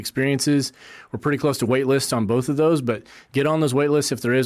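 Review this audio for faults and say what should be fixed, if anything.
Nothing here needs fixing; no faults were found.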